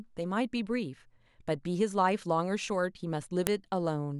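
At 3.47 s there's a sharp, loud snap that comes out of nowhere. It's a file header played as audio: a second WAV piece was joined on without its header being stripped, so those few dozen bytes of metadata got read as sample values. Because they bear no relation to the speech waveform, they land as one abrupt spike, heard as a crisp click right where the new piece begins.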